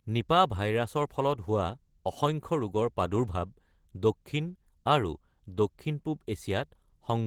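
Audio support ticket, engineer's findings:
Opus voice compression across the whole clip, start to end. The speech is hoarse and a bit robotic, with plainly audible coding damage. The spectrum runs up to about 20 kHz, so the band isn't narrowed. Sounds like hybrid mode: SILK linear prediction below 8 kHz, a thin CELT layer above, both starved. The graininess fits roughly 16 kbps in 20 ms frames. Probable culprit: an encoder bitrate set too low.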